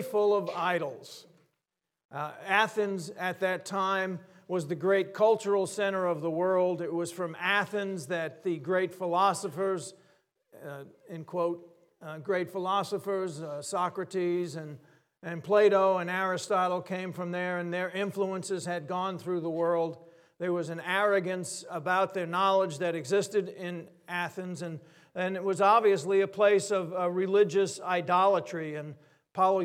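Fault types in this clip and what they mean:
No technical faults can be heard in this audio. There is nothing to list for it.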